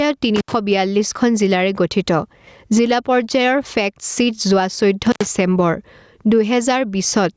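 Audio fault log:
Throughout: gain pumping. The gain swings by around 15 dB, likely gain set far too hot with a fast limiter clamping it.
0.36–0.53 s and 5.06–5.27 s: intermittent contact. The sound drops out for about 77 ms and 86 ms, with crackle at the edges and faint hiss in the gap, like a loose plug briefly opening.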